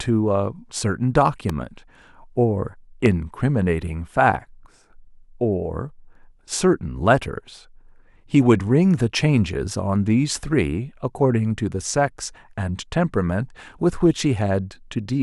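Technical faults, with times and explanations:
1.49–1.52 s and 3.06–3.08 s, loud pop: two sharp single pops sitting over the speech, the second louder, likely a plug, switch or static spike jolting the signal.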